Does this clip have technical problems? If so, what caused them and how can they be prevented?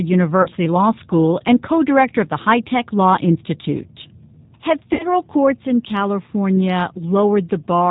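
Yes. The G.729 codec is audible throughout. At 8 kbit/s the decoder rebuilds the speech from a vocal tract filter, a pitch predictor and a few pulses per 5 ms, passing nothing above 4 kHz, so the sound is dull, rough and slightly synthetic. Using a wideband codec such as G.722 or Opus at a higher bitrate would prevent this.

VoIP packet loss concealed by the speech codec occurs at 0.42 to 0.48 s, where about 40 ms went missing, which fits two 20 ms packets, and at 4.93 to 5.04 s, where about 60 ms went missing, consistent with three. At both points the decoder stretches the last pitch and filter into a buzzy tone or coloured noise that fades, and the speech stays weakened briefly after packets resume. A more stable network path with QoS prioritisation, an adequate jitter buffer, or forward error correction would prevent this.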